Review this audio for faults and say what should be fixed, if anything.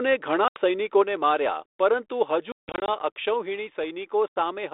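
Hard-edged silent holes cut the speech at 0.48 to 0.58 s, 2.52 to 2.89 s (gaps scattered across the span, the longest 160 ms) and 4.28 to 4.36 s, and each is followed by briefly distorted speech. This is packet loss on an ADPCM call: the lost packets were replaced by silence, and the G.726 decoder's adaptive predictor and step size lost sync with the sender's, taking tens of milliseconds to recover. To prevent it, add packet loss concealment that keeps the decoder state running through gaps, and use a jitter buffer or better network prioritisation to reduce losses.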